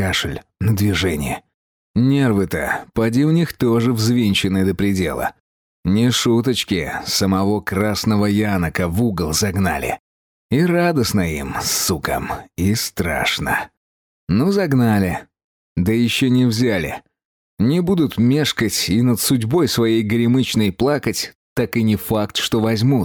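Gain pumping runs throughout: the input gain is likely set far too high, so a fast limiter keeps clamping down on every loud sound and releasing in the gaps. The gain swings by around 10 dB, squashing the dynamics.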